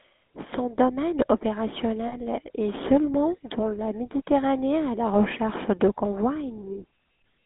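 Throughout, the speech carries GSM full-rate codec damage: the line passes only about 200 Hz to 3.7 kHz, and the pulse-driven vocal-tract model adds a buzzy, gravelly roughness, which fits 13 kbps GSM. Plain band-limiting would sound merely muffled, without this grain.

From 2.08 to 2.17 s, just before "est seulement dans la", lost GSM frames were concealed by repeating the last good frame, which fits two lost 20 ms frames. Instead of the silent hole a simple dropout would leave, the sound is held as a brief rough, metallic ring.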